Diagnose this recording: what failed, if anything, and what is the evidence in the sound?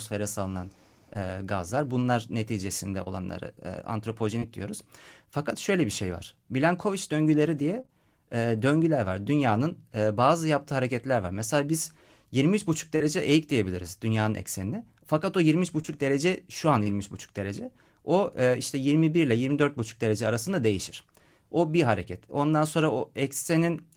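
Short concealed packet loss at 1.13, 3.04, 7.82 and 7.86 s (the last two back to back just before "e döngüler var"), and at 12.96 s before "eğik diyebiliriz dünyanın eksenine": a network fault. Each 20 to 40 ms hole was patched by extending the preceding sound, leaving brief smears or wobbles.

Scattered short gaps between 15.82 and 16.87 s, also in the network path: about three separate losses, the longest around 20 ms and about 60 ms missing in all, each concealed by continuing the last sound. The result is small hiccups spread across that second.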